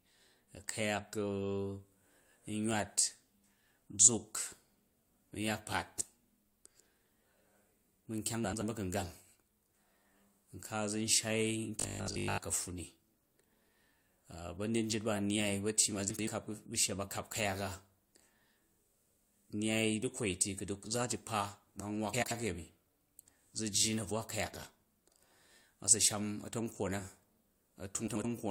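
At 8.44 to 8.62 s, the first case of frames out of order: two neighbouring runs of roughly 85 ms, which fits blocks of four frames each, were decoded in reversed order, so this short stretch plays with its halves swapped. It comes across as a brief garbled flutter. Unlike a dropout or a repeat, nothing is missing or doubled, and the timing afterwards stays intact.

From 11.80 to 12.38 s the sound turns into a rigid, metallic buzz locked at 50 Hz while still loosely following the speech underneath. This is robotic sound from repeated short buffers: a 50 Hz buzz implies a stretch of about 20 ms being replayed over and over, likely because new audio was arriving too seldom, with the repeats covering most of the span. What distinguishes it from an ordinary tonal hum is that the buzz appears only here.

The same frames-out-of-order flutter recurs at 16.10 to 16.28 s, 22.13 to 22.32 s and 28.07 to 28.25 s, each time as two swapped blocks of about 85 ms with no lost time.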